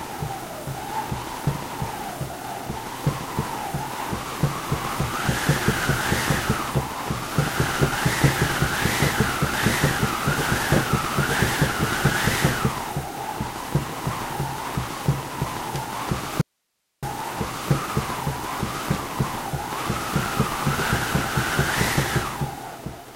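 An audio dropout to a faint residue runs from 16.41 s to 17.03 s: the sound cuts out abruptly for about 0.61 s and returns just as suddenly. What fills the gap is only hiss, sitting roughly 50 dB below the normal signal level. The signal path after the break evidently stayed live while the wanted audio feeding it was lost, likely an interruption upstream, so the gap holds the noise floor rather than true silence.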